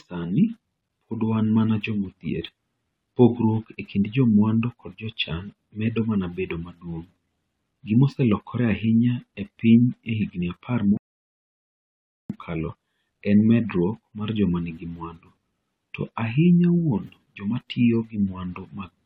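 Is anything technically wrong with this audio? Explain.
Yes, there's one clear problem. At 10.97 s, right after "piny e higini apar", the speech drops out into silence until 12.30 s, a rebuffering stall. The player burned through its downloaded audio and simply paused until more data turned up. When it comes back, it picks up exactly where it left off, so nothing's missing. You just get roughly 1.3 s of dead air wedged into the middle of the speech.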